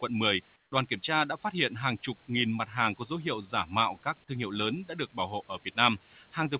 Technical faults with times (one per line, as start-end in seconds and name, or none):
0.56-0.72 comfort noise in place of the background
2.65-2.91 noise suppressor catching up